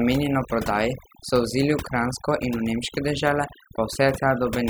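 From start to finish the speech has overdone noise removal. The noise reduction was pushed way too hard, so any frequency band sitting close to its noise estimate gets pulled right down or shut off, and the quieter parts of the voice go along with it. You hear it as a near-silent background full of little twinkling specks.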